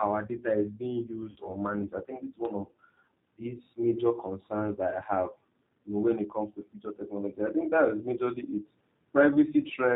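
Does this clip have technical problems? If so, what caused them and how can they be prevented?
Yes. Throughout the clip the speech has the rough, slightly synthetic quality of the G.729 codec. The damage is plainly audible and fits G.729A at 8 kbit/s: the decoder rebuilds each 10 ms frame from a filter, a pitch predictor and a few pulses. A spectrogram would show nothing above 4 kHz and smeared harmonics. Choosing a wideband codec such as G.722 or Opus prevents this.

From 1.30 to 1.37 s, VoIP packet loss concealed by the speech codec fills a gap of about 60 ms, consistent with three lost packets. The decoder repeats its last pitch and filter at falling gain, so the sound turns into a fading buzz or coloured noise. The waveform shows a shrinking stretch, and the voice stays weak or distorted for tens of milliseconds afterwards. Jitter buffering and forward error correction on the network path would prevent it.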